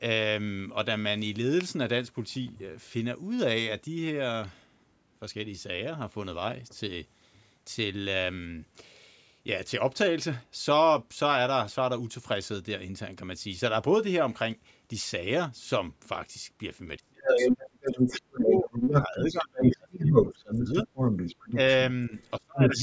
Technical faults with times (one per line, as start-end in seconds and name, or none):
16.98-20.88 speech suppressed in double talk
17.27-21.59 other side's voice leaking through
22.09-22.83 speech suppressed in double talk
22.18-22.83 other side's voice leaking through